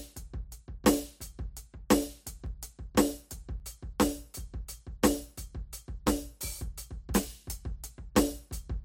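Sharp single clicks at 2.46, 3.60, 4.73, 6.07 and 7.27 s in the music, each a brief discontinuity, likely dropped samples, with about 0.7 ms of the waveform missing.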